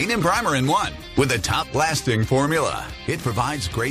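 Damaged data in a compressed stream breaks this short piece of audio between 1.61 and 1.63 s. At that point some of the encoded bytes no longer form valid frames, so the decoder misreads or discards them, loses its place in the bitstream and has to search forward for the next intact frame header before decoding normally again. That brief failure is heard as a sudden blip in the audio, lasting only about 20 ms.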